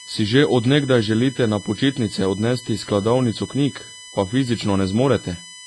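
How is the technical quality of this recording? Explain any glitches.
Pretty rough, honestly. Two problems run through the whole speech clip, start to finish.

USB whine: there's a steady tone built on 1 kHz, loudest at its third harmonic around 3 kHz, sitting roughly 20 dB under the speech. It's USB bus current, pulsing at the 1 ms frame rate, leaking in through power or ground and coming out as a fixed-pitch whine.

AAC compression: the speech sounds dull and smeared, with plainly audible warbly, fizzy artefacts and nothing above 11.5 kHz. That's likely lossy AAC-LC coding at a low rate, fitting something around 32 kbps. The encoder drops the top end and starves bands it judges less audible.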